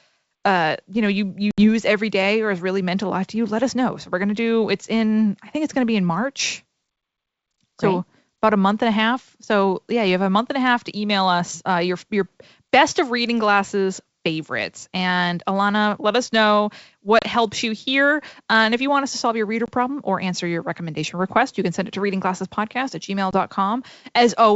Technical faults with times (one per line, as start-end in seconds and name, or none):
1.51-1.68 packet loss on an ADPCM call
17.19-17.25 packet loss on an ADPCM call
19.66-19.70 packet loss on an ADPCM call
23.31-23.38 packet loss on an ADPCM call